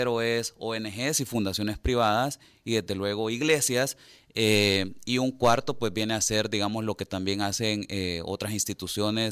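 No technical faults can be heard in this recording.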